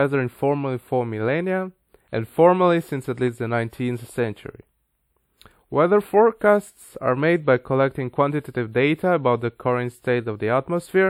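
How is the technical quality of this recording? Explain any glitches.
The recording has one fault, a channel delay (comb filtering) present throughout. One channel arrives a few samples late, about 0.07 ms, and summing to mono cancels shared content at evenly spaced frequencies, starting around 7 kHz. The top of the speech sounds hollow and phasey. A spectrogram shows a fixed dark horizontal notch band near 7 kHz for the whole clip, while the waveform looks largely unchanged.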